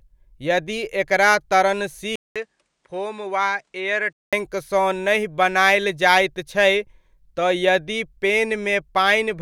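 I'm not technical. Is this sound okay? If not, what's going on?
No. From 2.16 to 4.33 s the speech goes duller and a little quieter after a brief gap, then clears, likely an input switched to a poorer device, not just a dropout.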